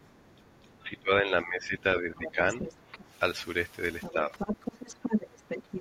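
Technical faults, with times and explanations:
0.01–0.73 s, other side's voice leaking through: a very faint second voice, around 35 dB under the main talker, sits beneath the opening. It is an added voice rather than a loss of level, likely loudspeaker echo that the canceller left in the microphone signal.
0.80–2.62 s, speech suppressed in double talk: the talker's own voice sinks by up to about 10 dB over roughly a second and a half, in dips and dulled patches. Nothing is added here. The talker is pushed down, likely because the echo canceller ducked everything while both sides spoke at once.
2.23–2.32 s, 2.59–2.74 s, 2.92–3.05 s and 4.01–4.14 s, other side's voice leaking through: short scraps of a second voice break in, about 10 to 20 dB under the talker. The loudest is at 2.59 s, just as the suppression lifts. These are brief intrusions of foreign sound rather than the talker fading, likely residual echo passing the canceller in bursts.
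4.13–4.34 s, speech suppressed in double talk: a shorter, shallower dip of about 5 dB lasting roughly 0.2 s, pressed between two leaks. The talker thins out instead of a new voice appearing, likely the canceller clamping down again during overlapping talk.
4.33–5.80 s, other side's voice leaking through: the second voice returns and stays to the end, only about 5 dB below the talker. It is nearly as loud as the main speech and clearly a separate voice, likely echo the canceller failed to remove.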